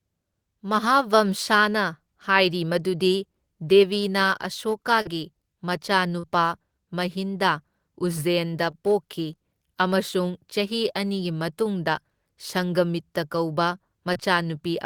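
Speech with four instances of short concealed packet loss, at about 5.01, 6.19, 8.71 (just after "ꯃꯍꯤꯟꯗꯥ ꯎꯖꯖꯦꯟꯗ") and 14.13 s. Roughly 40 ms, then 20 ms, of audio arrived too late, and the receiver extrapolated the preceding sound before blending back, leaving brief smears or wobbles.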